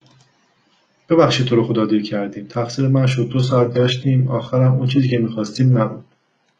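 At 3.06 s the speech drops abruptly into an adaptive stream at a lower bitrate, and it stays there to the end at 6.6 s. There is no gap. The quality simply switches. The connection likely slowed, so the player swapped to a leaner version of the stream. Treble is gone above 10.4 kHz, and the upper range turns thin. The sound points to a fall from a clean AAC stream near 96 kbit/s to HE-AAC near 12 kbit/s.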